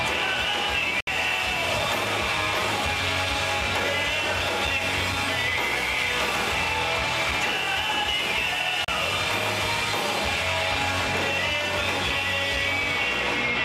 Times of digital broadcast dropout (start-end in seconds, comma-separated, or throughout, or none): 1.00-1.07, 8.84-8.88